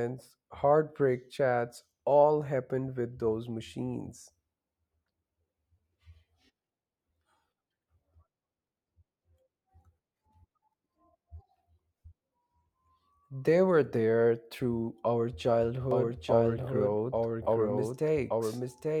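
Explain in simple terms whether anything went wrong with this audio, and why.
From 15.91 s to the end there's a doubled audio track: the speech repeats about a second behind, noticeably quieter, likely from a second, slower capture path.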